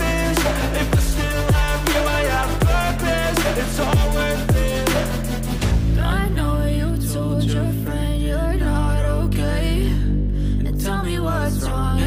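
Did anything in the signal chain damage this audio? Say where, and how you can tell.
No, no signal-chain damage heard.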